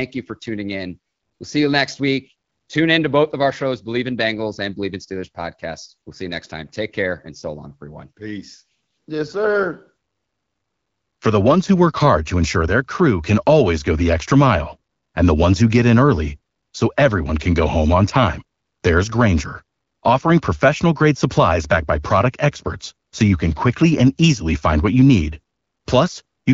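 Nothing here needs flagging; it's just speech carried over the AMR wideband (HD Voice) codec at 12.65 kbit/s, a rate where the coding leaves only a light touch on the sound.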